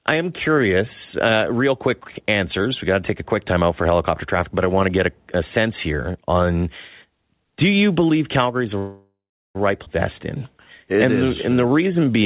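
Speech carried over a call link, band-limited with nothing above 4 kHz, which fits G.711 A-law at 64 kbps. From 8.78 to 9.57 s, just after "is the", there is a call audio freeze. The last sound carries on as a fading buzz or hiss, then about 370 ms of near silence. The fill lasts 768 ms. Nothing is lost. Speech resumes where it stopped, just later. The likely cause is packets held up in transit, leaving the jitter buffer empty. At 9.85 to 9.88 s, right after "is the right", the audio does a skip ahead. There is almost no gap, only a 13 ms join. Roughly half a second of speech is gone, and the two sides butt together. This undoes most of the delay the freeze built up. Later audio was already queued, so the missing stretch was dropped in transit or by an overflowing buffer. From 11.49 to 12.21 s there is a jitter buffer slow-down. Pitch stays the same, but the speech plays at 87% speed. Sounds are drawn out. 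The receiver repeated single pitch periods and pause fragments many times, adding 99 ms. That built up a reserve in its buffer.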